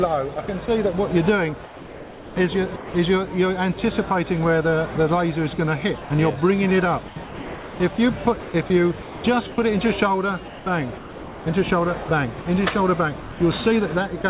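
Between 0.34 and 0.68 s, and again from 1.64 to 2.94 s, the sound breaks into holes filled with steady synthetic noise. This is sound chopped by the voice detector, most likely a sender's detector toggling off and on, with about 60 ms and 900 ms replaced by comfort noise.

At 6.02 to 6.10 s the sound gives way to noise for 80 ms before returning. This is sound dropped by the voice detector: the sender likely mistook it for background, stopped transmitting, and comfort noise played instead.

The chopping returns over 7.08 to 9.58 s (about 1100 ms replaced), 10.48 to 11.46 s (660 ms) and 12.04 to 12.46 s (100 ms).

Single dropouts follow at 13.20 to 13.40 s (200 ms) and 14.22 to 14.24 s (20 ms). Throughout, the G.711 call path leaves nothing above 4 kHz.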